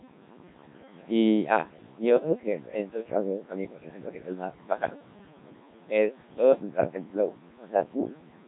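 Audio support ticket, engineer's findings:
Noise suppressor artifacts, full clip. Background drops sharply in pauses, then swells back under speech. Room noise, about 10 dB below speech, is pulled down by about 21 dB between phrases. Probable component: noise suppressor. Mechanism: bands judged steady noise are attenuated frame by frame, so the gating tracks the speech.

Codec 2 vocoder, full clip. Heavy damage: speech robotic and buzzy, with a synthetic timbre; the room noise underneath is mangled too. Probable component: Codec 2 at a very low rate, fitting its 1.3 kbit/s mode. Mechanism: only pitch, voicing, energy and spectral envelope are sent, and the decoder rebuilds the voice from sine waves without the original waveform.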